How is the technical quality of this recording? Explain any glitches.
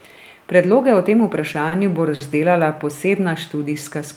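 The speech has two brief stalls, at 1.68–1.73 s and 2.15–2.22 s, where a sound hangs for a moment with a faint buzz or dip. Both are short stalls from a late packet. The jitter buffer ran dry and the receiver stretched the last sound, for 30 ms and then 50 ms, until the packet arrived. Nothing is lost, but the playback falls slightly further behind each time.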